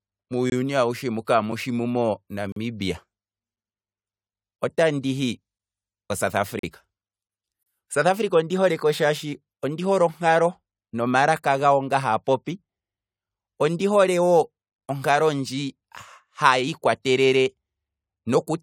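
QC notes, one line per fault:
0.50 to 7.63 s, gap between stream segments: hard-edged silent holes at 0.50, 1.52, 2.52, 3.56, 4.57, 5.58, 6.59 and 7.63 s, lasting 4 to 42 ms, about once per second. Timestamps of consecutive one-second segments fail to meet, so the player pads each join with silence. Nothing is cut from the speech.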